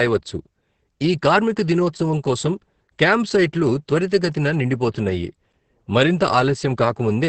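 From start to finish the speech sounds muffled, hoarse and faintly robotic, with nothing above about 8.5 kHz. This is Opus voice compression in its SILK mode at wideband, which, with damage this heavy, points to a starved bitrate near 10 kbps that codes the excitation coarsely.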